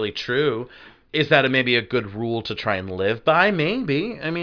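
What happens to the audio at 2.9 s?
Nothing goes wrong at 2.9 s; the speech carries on intact through that moment with no dropout, glitch or distortion.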